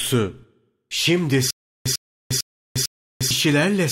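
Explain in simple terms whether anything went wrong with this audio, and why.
Between 1.51 and 3.31 s the speech hits a stutter with silent gaps. A tiny chunk of sound, about a tenth of a second long, plays, then there's dead silence for roughly 0.35 s, and that same chunk comes back four times at a steady beat of about 0.45 s. The likely cause is a player or stream stalling and replaying its last snippet on each retry, so whatever should have played there is simply lost.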